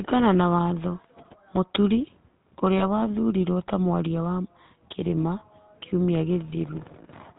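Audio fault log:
Throughout: GSM full-rate codec. The whole recording has that buzzy, gravelly grain of the old GSM phone codec, plainly audible here, with nothing above 4 kHz. It's a low-rate vocal-tract model fed by a sparse pulse excitation, so the fine texture of the voice gets replaced by a rough, regular buzz, which fits a 13 kbps full-rate stream.
2.78–2.83 s: lost GSM frames. There's a short metallic, ringing smear about 20 ms long where one frame went missing. The decoder just reused the last good frame's settings, so the sound briefly hangs and rings rather than dropping out.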